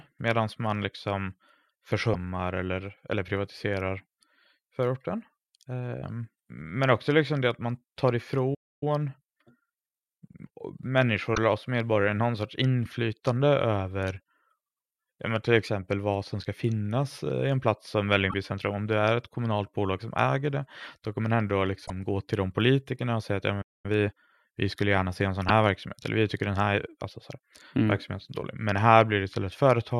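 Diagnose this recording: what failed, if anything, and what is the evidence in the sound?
Codec stage: damaged data in a compressed stream produces short chirps or squawks at 2.10–2.15 s, 11.32–11.38 s, 18.28–18.34 s, 21.83–21.90 s and 25.45–25.50 s, each about 50 to 75 ms long. At each one the decoder met corrupted frames, lost sync and hunted for the next valid header. Unlike a stall, each event is brief, a fraction of a tenth of a second.

Buffer or playback stage: a playback stall cuts the speech off mid-flow twice. The first comes right after "det att man tar", from 8.54 to 8.83 s (about 0.27 s of silence). The second runs from 23.61 to 23.86 s (about 0.22 s). The silence points to the output running dry, likely a buffer underrun or a blocked playback thread. That separates it from corruption, which makes a noisy burst and jumps forward.

Playback stage: time-compressed catch-up follows each stall as the player drains its backlog. 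From 8.83 to 10.63 s the speech runs about 1.15 times faster. From 23.86 to 24.30 s, between "och säga att ja" and "vi skulle gärna se", it runs about 1.5 times faster and sounds rushed. The pitch stays normal throughout. That rules out a sample-rate mismatch, which would raise the pitch along with the speed.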